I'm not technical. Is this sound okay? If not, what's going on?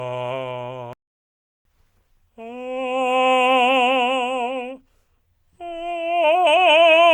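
No. At 0.93 s the music suddenly cuts out and stays silent for about 0.72 seconds, until 1.65 s. This is a playback stall. The player likely ran short of data or was briefly held up, so it had nothing to send out.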